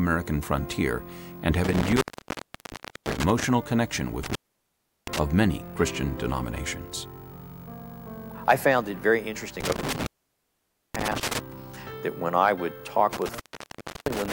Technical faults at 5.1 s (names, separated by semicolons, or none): intermittent contact